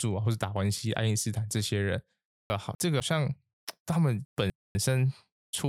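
From 2.5 to 3.0 s and 4.25 to 4.75 s, chunks out of order swap two 250 ms pieces of speech, jumbling them; unlike a dropout, nothing goes missing.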